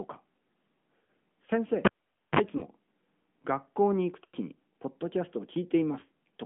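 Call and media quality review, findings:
AMR narrowband mobile codec throughout: band limited to 150 Hz to 3.4 kHz, plainly buzzy, synthetic texture consistent with a roughly 10 kbps AMR-NB mode. Excitation model audibly coarse.

Lost AMR speech frames at 1.04 to 1.08 s, 2.58 to 2.62 s, 4.24 to 4.36 s and 6.00 to 6.04 s. Decoder concealment repeats parameters with decaying gain. Brief dips or warbles, and the 100 ms gap at 4.24 s smears and fades.

Cable pulled and plugged in, 1.85 to 2.39 s. Pop, then about half a second of near silence, 44 ms of 50 Hz mains buzz during tip contact, and a second pop on reconnection.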